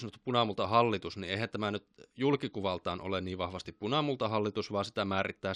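No technical faults can be heard anywhere in the recording. Nothing in the speech needs a timestamp or an account of what went wrong.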